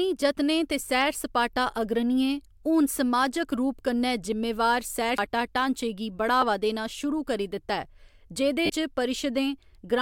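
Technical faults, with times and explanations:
5.18 s, CD skip: Right after "रूप कन्नै जिम्मेवार सैर" and before "ढाँचे गी", there is a tick and a very brief dropout of a few milliseconds, then the speech resumes from a different point. The laser jumped to another turn of the disc's spiral, so playback carries on from elsewhere in the track. The waveform shows a short flat gap and an abrupt mismatch in level and phase. The spectrogram shows a thin vertical click line.
6.41 s and 8.65 to 8.70 s, lost LE Audio frames: The first loss lasts 10 ms, between "ढाँचे गी" and "देना शुरू करी दित्ता", which fits one frame. The second lasts 40 ms, which fits four frames. In each gap the LC3 decoder repeated the previous spectrum with randomised signs, so the voiced sound turns into a brief noisy smear. On a spectrogram, the harmonic striations blur into diffuse energy with a similar overall shape. The waveform loses its periodic pattern and looks noise-like.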